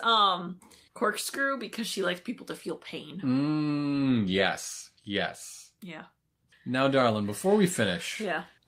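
No technical faults are audible.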